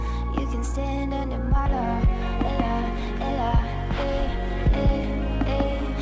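At about 1.66 s to 1.68 s the audio makes a skip ahead. Roughly a second of sound was discarded, likely by a jitter buffer that had overflowed while later audio was queued, so playback leaps forward with no gap or fill and two moments about a second apart are butted together. It sounds like an abrupt cut. On a spectrogram a vertical seam appears where the patterns before and after fail to continue, all within a band that stops at 8 kHz.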